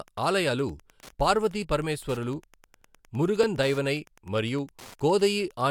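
It's a short speech recording with Wi-Fi interference running right through it: a steady tick every 102.4 ms, so roughly ten a second, sitting around 30 dB under the voice. That's a nearby Wi-Fi radio's beacon being rectified by the audio circuit.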